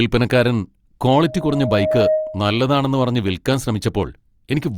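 From 1.15 s to 2.64 s the speech is overtaken by loudspeaker feedback squeal. A microphone is picking up the loudspeaker it drives, and at 624 Hz the loop gain has passed unity, so that frequency feeds on itself. It is heard as a pure tone that swells over roughly a second until it sits a few decibels above the speech, then stops at 2.64 s when the loop is broken.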